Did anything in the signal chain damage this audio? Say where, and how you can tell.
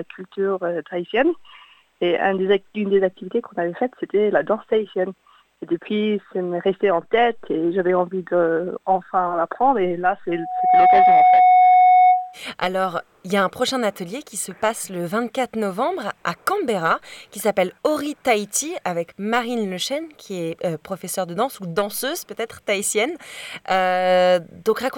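Yes. There is loudspeaker feedback squeal from 10.29 to 12.39 s. The damage happens in the analogue stage, where a microphone hears the loudspeaker it drives. A single steady tone at 734 Hz appears and swells over about half a second. It ends up roughly 10 dB louder than the programme sound. One frequency rising by itself is the mark of a closed acoustic loop. At 734 Hz the loop gain passed one, so the tone kept feeding itself until it stopped.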